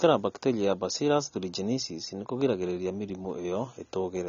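From start to finish, the speech sounds dull and band-limited, with nothing above 6.9 kHz. Sibilants come out fizzy and smeared. The likely cause is AAC compression. The encoder discards the top bands and coarsely quantises what remains, which fits a low bitrate near 24 kbps.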